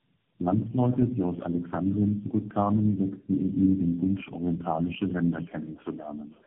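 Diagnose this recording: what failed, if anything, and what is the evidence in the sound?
Tandem speech coding at the codec stage: from start to finish the speech sounds rough, muffled and warbly, with a band-limited spectrogram ceiling near 3.8 kHz and smeared, wobbling harmonics. This points to about four low-rate speech coders in a row, each re-encoding the previous one's degraded output.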